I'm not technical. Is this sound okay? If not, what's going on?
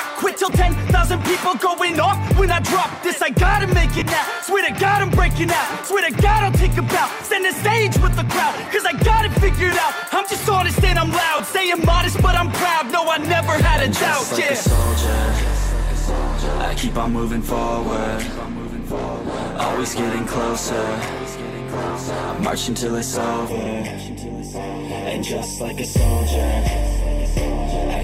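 No. The sound has two problems.

First, lost LE Audio frames. At 3.99, 11.38, 21.89 and 23.65 seconds, brief pieces of the wireless audio went missing. The shortest gaps last about 10 ms and the longest about 30 ms. The receiver patched each gap with a rough, noisy copy of the sound just before it. You hear this as a quick smeared blip.

Second, channel delay (comb filtering). From 23.49 seconds to the end, one side arrives a tiny fraction of a millisecond late. When the two sides are combined, certain pitches cancel, starting around 1.5 kHz. The sound turns hollow and phasey.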